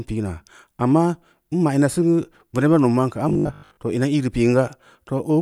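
Speech, with one fault. From 3.29 to 3.79 s, the sound turns into a robotic sound from repeated short buffers. It becomes a rigid, metallic buzz at a fixed 50 Hz, and only loosely tracks the speech beneath it. The likely cause is audio arriving too slowly. The playback side fills each gap by looping the most recent chunk, which fits a 20 ms buffer. Most of that half second is repeats, and the real audio in between is skipped.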